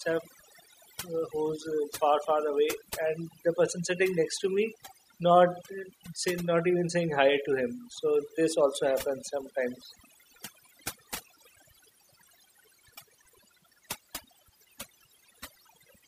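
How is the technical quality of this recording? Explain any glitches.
The recording suffers from overdone noise removal across its whole length. A noise reduction stage set far too aggressively cuts individual frequency bands whenever they sit near its noise estimate, taking quieter parts of the speech along with the noise. Pauses collapse into near silence dotted with twinkling specks.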